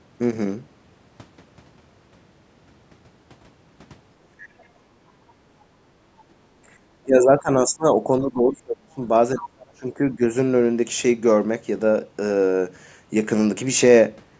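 At 4.59 to 4.65 s and again at 6.18 to 6.24 s, faint scraps of a second voice slip through, very quiet, roughly 35 dB under the talker. This is other side's voice leaking through, likely echo from the device's loudspeaker that the echo canceller failed to remove from the microphone. On a spectrogram each shows as a short, weak smear of voiced harmonics. On the waveform they are barely visible ripples.

Between 5.03 and 5.13 s the room background is gated by the echo canceller. While the loudspeaker played, the canceller pulled the microphone down by about 12 dB, so the room sound dips for a moment, less than a tenth of a second in all, then returns. A spectrogram shows a brief vertical band where the background noise floor fades and recovers. On the waveform the noise envelope shows a small notch.

Speech is suppressed in double talk at 7.03 to 7.86 s, 8.07 to 9.03 s and 9.35 to 10.22 s. 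Each stretch loses around 0.7 s of the talker's own voice, which dips, thins and breaks into pieces. The drops are about 20 dB in the first, 35 dB in the second and 30 dB in the third. With both sides talking at once, the canceller likely treated the local voice as echo and turned it down along with the echo. On the waveform the speech envelope collapses in jagged chunks. The spectrogram shows harmonics fading out beneath the 8 kHz ceiling that the call's microphone processing normally sets.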